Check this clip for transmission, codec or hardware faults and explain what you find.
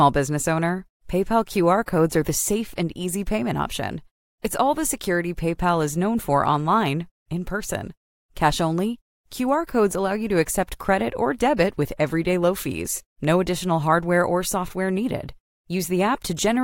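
No faults found anywhere in the speech recording.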